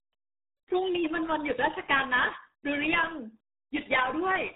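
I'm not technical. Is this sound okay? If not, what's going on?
No. From start to finish the speech sounds muffled and gargly, like an old dial-up internet broadcast. That's the RealAudio 14.4 codec, which squeezed audio very hard to fit slow modems, discarding everything above about 3.8 kHz and smearing what remained.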